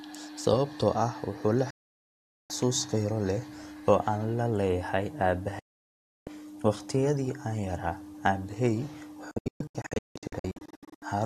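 From the start and throughout, quiet passages of the speech turn gritty and grainy, with noise about 35 dB below the signal that tracks the voice. This is likely low bit depth without dither: rounding to roughly 9 bits makes errors that follow the waveform.

Also throughout, a roughness rides on loud and bright sounds and disappears in pauses, sitting around 45 dB down. That is sample clock jitter: a clock wobbling by roughly a microsecond makes errors that grow with waveform slope.

From 1.70 to 2.50 s, between "ah waxuu la" and "qiiro leh oo aan", the sound fades to silence in 3 ms. It cuts again from 5.59 to 6.27 s after "oo aan la leyahay". From 9.31 to 11.05 s, after "aan yaraa abbaheey", it breaks into scattered holes, the longest about 170 ms. Each is a digital broadcast dropout: the receiver muted when frames failed, losing that audio.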